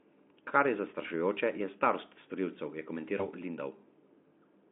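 At 3.17 s, just after "je starost storilcev je", VoIP packet loss concealed by the speech codec: a single lost 20 ms packet is bridged by extrapolation, leaving a fading buzzy or noisy smear until 3.27 s.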